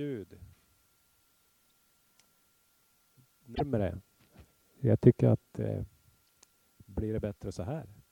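At 3.54 s the audio skips forward and the next 70 ms, to 3.61 s, come out damaged rather than clean sound. That length spans roughly three MP3 frames of about 26 ms each, pointing to a likely broken MP3 bit reservoir: after frames were cut, the following ones reached back for borrowed data and decoded someone else's bytes. A plain dropout would leave silence; here the damaged frames decode from the wrong data.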